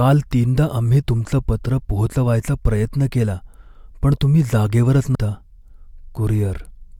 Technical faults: compressed frames skipped

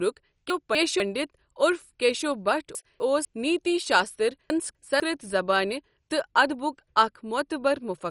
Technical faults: MP2 compression; chunks out of order

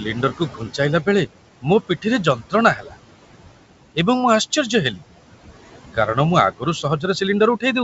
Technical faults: noise suppressor artifacts; speech cut by the noise suppressor

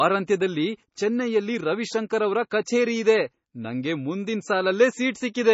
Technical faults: MP3 compression

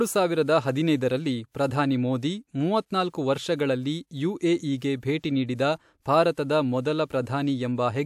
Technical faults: pre-echo

